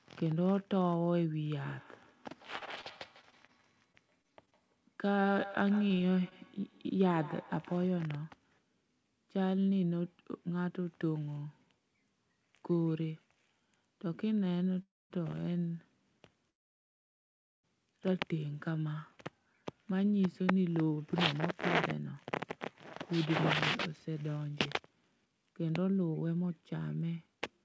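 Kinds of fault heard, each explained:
Feedback echo between two devices: A second device in the room replays the call into a microphone. From 1.43 to 8.01 s each sound returns roughly every 150 ms, about 16 dB down.
Repeated packet loss (robotic sound): Between 2.58 and 4.54 s, ten short holes are patched by continuing the previous sound. The speech turns choppy, with small pieces missing.
Short concealed packet loss: Three brief holes at 5.88 to 5.92, 5.98 to 6.01 and 6.29 to 6.33 s are filled from the last sound. Each leaves a short smear or wobble.
Call audio freeze: Speech halts and resumes where it stopped, from 14.82 s for 0.3 s and from 16.50 s for 1.16 s. Nothing is lost. Held-up packets are the likely cause.
Jitter buffer speed-up: From 18.72 s to the end, tiny pitch-period pieces are cut to reduce delay, about 0.7 s in all. Speech runs at 109% speed and sounds hurried.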